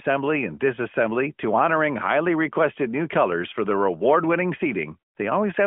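Listening through this speech recording, nothing stood out as a technical fault.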